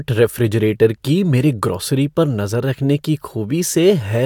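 No technical faults can be heard anywhere in this recording.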